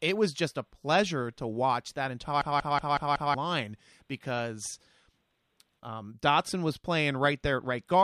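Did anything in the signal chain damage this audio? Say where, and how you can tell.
Yes, there's a system hang loop at the driver/buffer stage. Right after "pleasure to watch that", from 2.42 to 3.34 s, one 186 ms slice of speech repeats exactly five times, a machine-gun stutter at about 5.4 Hz. The host froze while the sound hardware kept replaying its ring buffer, whose length fits an 8192-sample buffer. When things recover, roughly a second of real audio is simply gone.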